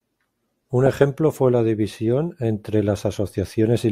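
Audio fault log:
Nothing to log here: no faults turned up anywhere in this stretch of speech.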